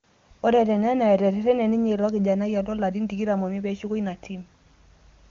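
Nothing in this speech stood out as a technical fault on listening, and the AMR wideband (HD Voice) coding sounds like it is running at one of its higher rates.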